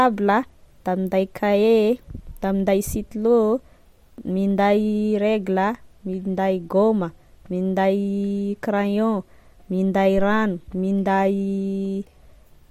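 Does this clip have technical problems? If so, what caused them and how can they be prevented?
Yes. At 10.18 to 10.58 s, a supply switched on or off on a live input sends a voltage step through the coupling capacitors, heard as a phantom power thump: a deep thud that dies away within about 91 ms. Mute the channel or pull the fader down before switching phantom power on or off.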